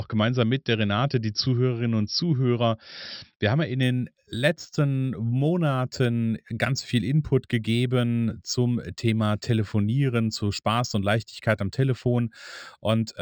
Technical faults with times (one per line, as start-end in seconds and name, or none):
3.83-13.22 imaging from linear upsampling